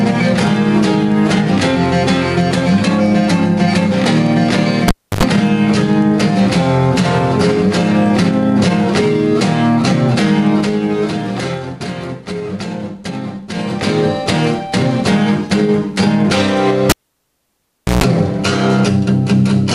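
At 4.88 s, a cable is pulled and plugged in. A pop cuts the sound to near silence for about 0.3 s. A short burst of 50 Hz mains buzz, roughly 90 ms long, follows as only the tip makes contact. A second pop marks the return of the signal at 5.23 s.

From 10.38 to 11.90 s, there is zipper noise. The level drops by about 10 dB in unsmoothed 3 dB steps, around two per second. Each jump leaves a small click, so a slow ticking rides on the sound as it fades. These changes land abruptly.

From 13.48 to 13.96 s, zipper noise returns as the level climbs by roughly 10 dB. It uses the same 3 dB steps, now about seven per second, which makes a faster ticking.

At 16.90 s, the cable is pulled again. The sound stays out for about 1.1 s. It ends with around 140 ms of buzz at 60 Hz, a different mains frequency from the first event. A pop brings the sound back at 18.04 s.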